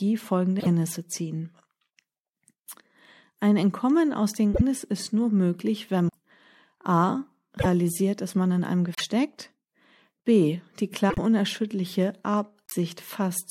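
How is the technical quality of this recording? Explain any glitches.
Speech with seven short glitches: at 0.59, 4.53, 6.08 (just after "ist nur möglich wenn"), 7.59 (right before "dass man in einem"), 8.95 (just after "dass man in einem"), 11.09 and 12.66 s. Each lasts 58 to 95 ms and sounds like a chirpy skip or brief dropout. That's likely a broken MP3 bit reservoir: missing frames leave the following frames, spanning about 26 ms each, pulling borrowed bits from the wrong data.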